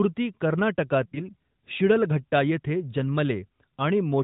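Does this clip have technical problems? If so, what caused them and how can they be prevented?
Yes. Lost AMR speech frames from 1.06 to 1.2 s: about 60 ms failed their checksum, so the decoder repeated the last pitch and vocal tract settings with falling gain, stretching and fading the sound. Stronger channel coding, better radio signal or jitter-aware retransmission would prevent it.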